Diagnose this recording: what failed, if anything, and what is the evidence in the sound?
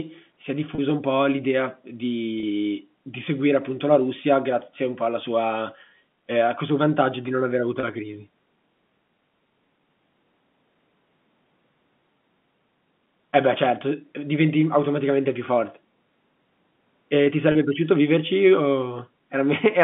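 Packet loss with pitch repetition at the network stage: at 0.75 s after "si è", 2.4 s before "di seguire appunto la", 7.8 s before "la crisi", and 17.52 s, a 30 ms gap, consistent with one dropped packet, is bridged by a repeated pitch period that sounds briefly held and buzzy. On a spectrogram it shows as frozen harmonics; on the waveform, identical cycles.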